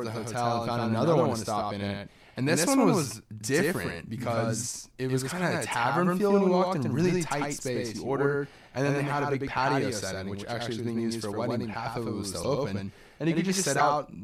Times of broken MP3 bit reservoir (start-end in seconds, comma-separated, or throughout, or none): 12.42-12.45, 13.78-13.81